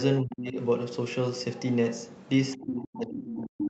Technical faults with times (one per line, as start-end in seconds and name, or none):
0.21-0.57 speech suppressed in double talk
2.57-3.69 speech suppressed in double talk
3.27-3.35 other side's voice leaking through